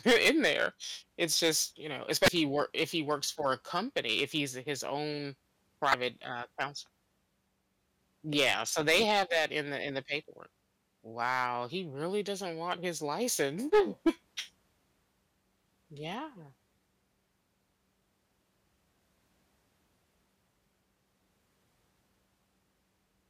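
Throughout the speech, the level reaching one stage of the chain exceeded what it could pass, by about 13 dB, so the loudest peaks were sliced flat. That is hard clipping. Only a small fraction of samples, under one percent, hit the ceiling, but each flattened top throws off harmonics high in the spectrum. The result is a brittle crackle riding on the stressed, loudest moments of the speech.

At 2.25 to 2.28 s, 5.91 to 5.94 s and 14.37 to 14.40 s, damaged data in a compressed stream caused the decoder to misread frames, lose its footing and hunt for the next valid frame header. Each event lasts about 34 ms. At each point the speech breaks briefly as decoding resumes past the corrupted section.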